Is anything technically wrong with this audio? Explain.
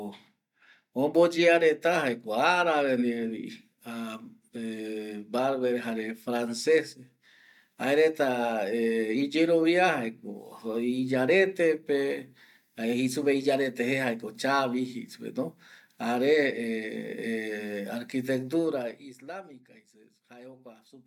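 No, nothing is technically wrong with this audio.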